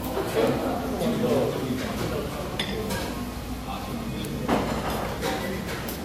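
Transcoding between lossy codecs runs through the whole clip: the sound carries two layers of coding damage, likely from a low-rate Vorbis pass near 49 kbit/s re-encoded to MP3 around 96 kbit/s. The MP3 stage spends bits reproducing Vorbis smearing while adding its own, and nothing survives above 16.7 kHz.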